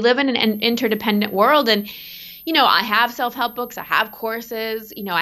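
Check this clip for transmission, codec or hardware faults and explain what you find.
One hardware fault is present: a switching supply whistle running from 0.42 s, just after "in an", to the end of the speech at 5.21 s. A switching power supply in the chain is cycling at an audible rate, or beating against another supply, and that leaks into the audio as a thin, high whistle, roughly 25 dB below the speech. Its pitch wanders between 12.5 and 13.2 kHz as the supply's load shifts. On a spectrogram it appears as a narrow, slightly wavering horizontal line in that band. It is too faint and too high to stand out in the waveform.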